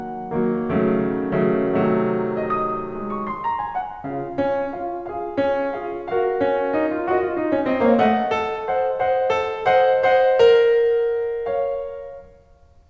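No faults are present in this music clip; it passes through a call path whose band stops at 8 kHz, which fits a wideband codec such as G.722.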